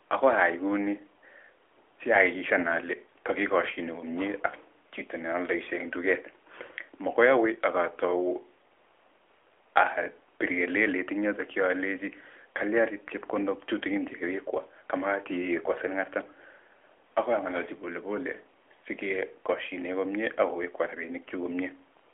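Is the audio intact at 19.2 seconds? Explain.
Yes, the audio is intact at 19.2 seconds, where the speech carries only the narrowband mobile-call character of the AMR narrowband codec at 12.2 kbps, with nothing above roughly 3.7 kHz.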